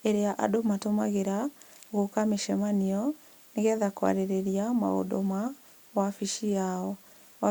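No technical faults can be heard anywhere in the speech.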